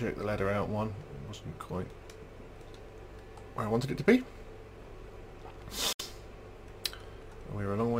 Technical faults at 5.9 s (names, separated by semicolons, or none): Bluetooth dropout